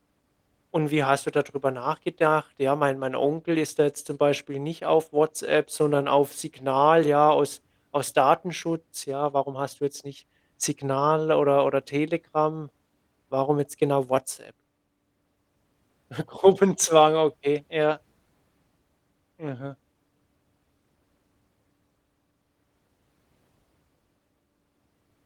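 Nothing in this recording stands out as a technical fault, so there's no moment that needs pointing to.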